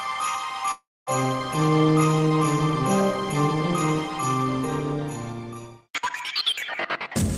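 At 0.71 s the audio stops being itself: the last sound smears into a buzzy, fading hiss, then drops to silence for roughly a quarter of a second before the audio returns at 1.10 s, jumping ahead with about 0.36 s of material simply gone. This is a long network dropout, likely caused by a run of packets that never arrived. The receiver stretched the final good audio to cover the gap, and once that faded it had nothing left to play.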